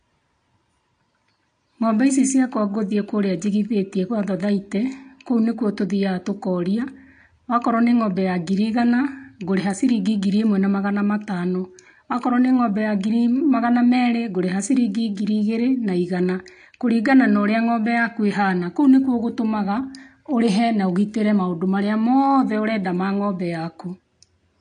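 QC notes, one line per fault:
Throughout: AAC compression. Speech sounds dull and smeared, with warbling fizz on sibilants and held vowels. A spectrogram shows a hard ceiling at 9.8 kHz, damage that fits a low bitrate near 32 kbps, likely from AAC-LC encoding.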